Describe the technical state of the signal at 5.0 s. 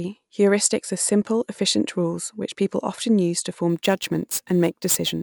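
At 5.0 s the speech carries imaging from sample-and-hold upsampling. It runs from 3.69 s to the end of the clip. The sound was raised from 24 kHz to 44.1 kHz by simply repeating samples, with no smoothing filter. Mirror copies of the spectrum therefore fill the 12 to 24 kHz band, about 15 dB below the speech. They add a bright, metallic fizz that tracks the level of the speech. The lowest copy drifts opposite to the pitch.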